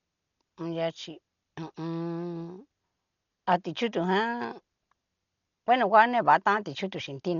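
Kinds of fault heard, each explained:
Dolby Digital compression: The speech sounds dull and boxed in, with nothing above about 6.9 kHz across the whole clip. The damage is heavy. A rough, fluttering noise clings to the voiced sounds instead of clean harmonics. This likely comes from AC-3 style coding at a starved rate, around 40 kbps. The encoder cut the band and left many frequency lines without detail. The decoder then filled those gaps with dither noise.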